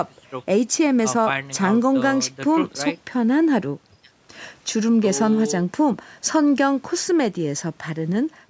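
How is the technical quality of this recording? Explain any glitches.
Nothing stood out on listening: the speech has the restricted top end of a call microphone chain, with nothing above about 8 kHz and the lowest bass trimmed, and no glitches or disturbances could be heard.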